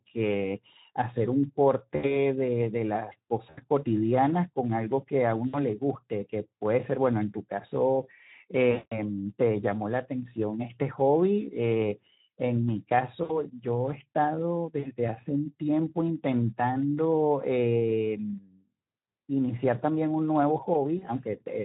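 Speech coded throughout with the Speex codec, and the damage is plainly audible: the voice sounds hoarse and noisy, which fits a Speex mode around 11 kbps. At that rate the CELP coder has too few bits to model the excitation cleanly. VoIP packet loss concealed by the speech codec occurs at 1.95–2.17, 3.50–3.64, 5.47–5.64, 8.71–9.00, 13.23–13.42, 14.79–14.91 and 20.97–21.08 s. Each gap sounds like about 40 to 80 ms of missing audio, and around 200 ms at 8.71 s. There the decoder stretches the last pitch and filter into a buzzy tone or coloured noise that fades. The voice then stays weak briefly after each gap while the decoder state rebuilds.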